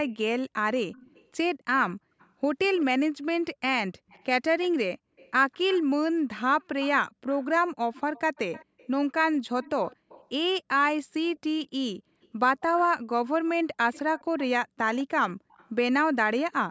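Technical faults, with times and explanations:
0.09–0.13 s, 0.92–1.28 s, 2.19–2.85 s, 4.09–5.81 s, 6.8–10.28 s, 11.36–11.40 s, 12.22–13.29 s and 13.93–15.70 s, echo leak: a faint copy of the speech trails it by about 200 ms (207 ms early on, 197 ms from 11.36 s). It sits roughly 20 to 35 dB under the direct speech, appearing in short scraps and longer stretches. The likely cause is a far end on loudspeaker whose echo canceller let part of its microphone pickup return down the line.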